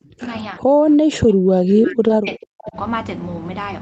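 Speech suppressed in double talk runs from 0.00 to 0.33 s and again from 0.52 to 2.77 s. The speech sinks by as much as about 40 dB in places and drops out in pieces. The likely cause is an echo canceller that, with both sides talking at once, couldn't tell its own talker from loudspeaker echo and turned everything down. An echo leak appears at 1.90 to 1.94 s as a brief, faint scrap of voice, roughly 15 dB below the speech. It arrives about 0.39 s after the original, which likely means a speakerphone's canceller let part of its microphone pickup slip back into the call. Short concealed packet loss at 2.07 to 2.11 s leaves a small smear where about 20 ms of audio never arrived. The receiver patched that gap by extending the preceding sound, within a band that tops out near 8 kHz.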